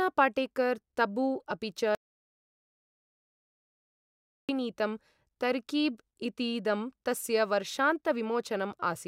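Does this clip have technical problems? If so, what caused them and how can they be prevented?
Yes. At 1.95 s the speech cuts out into dead digital silence with no room tone, returning mid-flow at 4.49 s, so about 2.54 s is lost: an audio dropout to silence, likely a lost input or stray mute while recording continued writing silence. Secure cables and links, monitor input levels live, and record a backup track.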